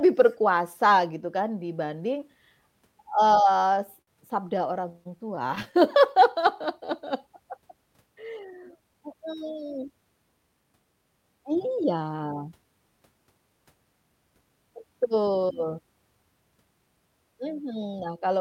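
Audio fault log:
3.41–4.09 s and 4.49–5.83 s: repeated stalls (stutter). Late packets emptied the jitter buffer. Sound was held over six gaps up to 57 ms, then sixteen brief ones, so delivery drags.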